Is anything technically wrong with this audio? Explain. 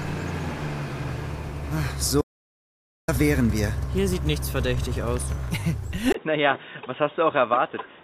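Yes, there are two faults. From 2.22 to 3.08 s the sound stops dead for about 0.87 s, and the gap is silent with no room tone, so whatever happened in that stretch is lost. This is an audio dropout to silence. The likely cause is that the input was briefly lost, through a disconnected device, a failed link or an accidental mute, while the recorder kept writing silence until the signal returned.

At 6.12 s, after a tiny break of about 20 ms, the sound suddenly turns dull and boxy and stays that way to the end. Nothing above 3.8 kHz survives, and new background noise sits roughly 35 dB below the signal, though the loudness stays about the same. This is an input switched to a poorer device, most likely a mid-recording change to a different microphone or a headset's call profile with a much narrower band and its own noise.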